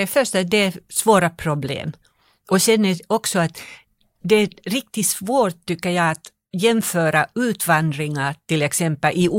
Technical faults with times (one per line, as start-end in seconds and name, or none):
none